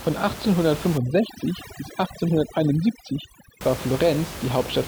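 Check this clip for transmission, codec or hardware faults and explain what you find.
One fault is present. From 0.98 s to 3.61 s, the background breaks up into twinkling near-silence. That is overdone noise removal, cutting bands near the noise estimate too hard. The room noise, about 11 dB below the speech, belongs to the recording itself.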